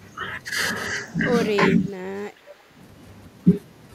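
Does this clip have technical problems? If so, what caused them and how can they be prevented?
Yes. From 0.77 to 2.12 s the speech turns roomy and hollow and drops about 5 dB, with more room noise: likely a switch to a distant microphone. Keep the close mic's connection and battery checked.

At 1.69 to 2.00 s and 2.34 to 2.44 s the speech dips sharply, roughly 15 to 20 dB. That's likely speech suppressed in double talk by the echo canceller. Headsets on both ends help.

At 2.48 to 2.63 s a faint copy arrives 388 ms late. That's likely an echo leak from a loudspeaker on the far end. Have them use headphones.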